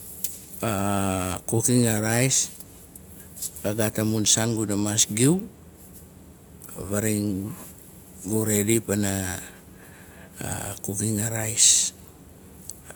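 No technical faults can be heard anywhere in the speech.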